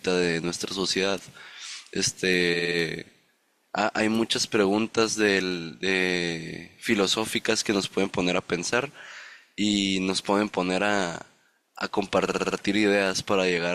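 Repeated frames at 2.53–2.77 s and 12.26–12.56 s: a 60 ms block replays four, then five extra times, giving a stutter and identical repeating spectrogram slices.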